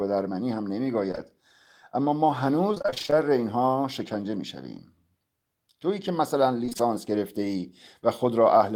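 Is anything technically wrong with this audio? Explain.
Yes. From 1.11 to 1.15 s and again from 1.15 to 1.19 s, speech briefly smears or wobbles. This is short concealed packet loss: two consecutive holes of about 20 ms each, fitting 20 ms packets, were filled by the receiver extending the preceding sound before blending back.

From 2.75 to 3.14 s and from 6.65 to 6.81 s, the speech turns choppy, with fragments missing. This is repeated packet loss (robotic sound). Gaps up to 27 ms recur rapidly, and roughly half of each stretch is patched audio.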